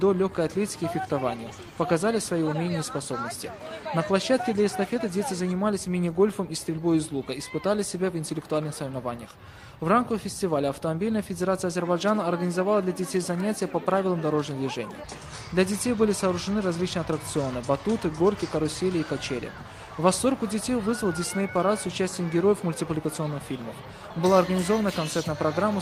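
No technical faults can be heard anywhere in this audio. Nothing in the sound points to a problem in how it was captured, processed or delivered.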